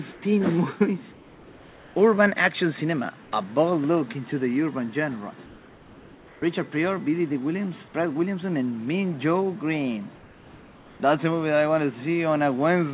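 Comfort noise stands in for the background at 0.12–0.22, 1.12–1.96, 3.24–3.32, 5.46–6.42 and 10.16–11.0 s, likely from discontinuous transmission. The detailed background becomes a steady, featureless hiss, up to about 8 dB quieter, instead of the true silence a noise gate would leave.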